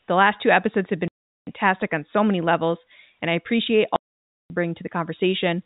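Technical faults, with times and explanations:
1.08–1.47 s, packet loss filled with silence: after "last two episodes have", speech drops into a 0.39 s hole. Missing packets were played as silence, so the hole has hard edges.
3.96–4.5 s, packet loss filled with silence: after "levels and I appreciate", a 0.54 s silent gap, consistent with 30 ms packets, cuts the speech. The gap has hard edges.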